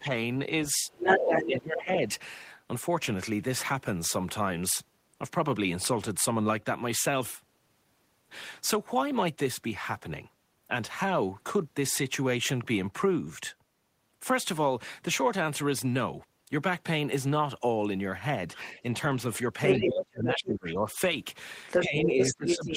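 At 0.0 to 0.12 s the speech dips by roughly 10 dB for a moment, likely speech suppressed in double talk: the echo canceller treats overlapping talk as echo and attenuates it. From 0.89 to 1.83 s a second voice is heard at about the same level as the talker, the other side's voice leaking through, likely residual loudspeaker echo that the canceller left in. From 1.18 to 2.1 s the talker is pulled down by roughly 15 dB over about half a second. The same pairing returns later. Leakage runs from 18.55 to 20.55 s, and the talker is suppressed by roughly 25 dB for around a second between 19.84 and 20.86 s. Leakage comes in again from 21.68 s to the end, and from 21.79 s onward the talker drops by roughly 15 dB.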